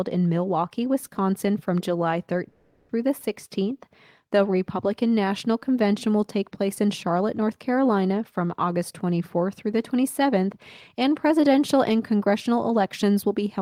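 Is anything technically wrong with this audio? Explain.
Yes. From 2.48 to 2.90 s the speech turns into a fading buzz or hiss, then resumes with that stretch lost, likely a long network dropout.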